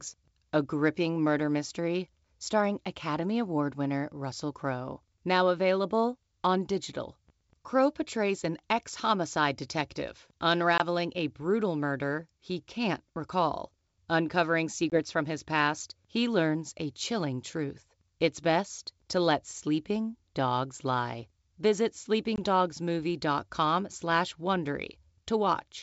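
Packet loss on an ADPCM call occurs at 10.78 to 10.81 s (between "an ex homicide detective" and "a brutal murder he"), at 14.90 to 14.99 s (just before "from his past he"), and at 22.36 to 22.38 s. Each is a single lost packet of about 20 ms, filled with silence and heard as a hard-edged hole. The decoder's adaptive predictor and step size then no longer match the sender's, so the audio resumes slightly off until they realign. The G.722 wideband coding, which sounds like a 64 kbit/s stream, stays clear around these gaps.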